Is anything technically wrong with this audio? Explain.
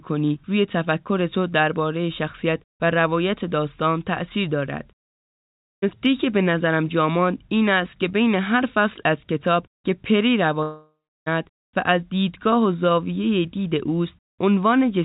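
Yes. The speech has two gaps that sound like a long network dropout. The first runs from 5.47 to 5.99 s, and the second from 10.63 to 11.28 s. At each gap the last sound is stretched into a buzzy tail that fades. It gives way to about 0.35 s of silence in the first gap and about 0.33 s in the second. Speech then resumes with roughly 0.36 s and 0.64 s of material missing.

The likely cause is packets that stopped arriving. The receiver's concealment repeated the last audio for a short time and then muted, and the speech resumed from a later point without the lost part. On a waveform, each gap shows a short stretch of repeated cycles that shrink to a flat line before the speech restarts abruptly. On a spectrogram, the harmonics smear into horizontal streaks that fade into a blank column. The call path itself sounds like G.711 mu-law at 64 kbps, and nothing is present above 4 kHz.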